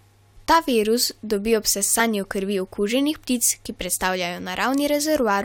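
At 1.99 s, just after "virus dobi ob", damaged data in a compressed stream causes a brief glitch. The decoder misread corrupt frames and resynced.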